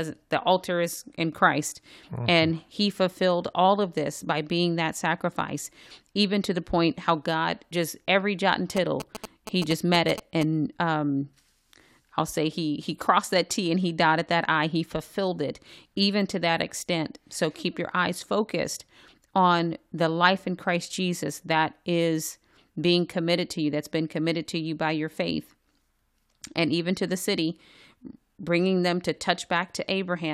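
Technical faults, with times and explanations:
8.77–10.43 s, GSM signalling bursts: after "just every jot and", a galloping dit-dit-dit of short 217 Hz buzzes as the audio circuitry rectifies a nearby 2G phone's radio bursts.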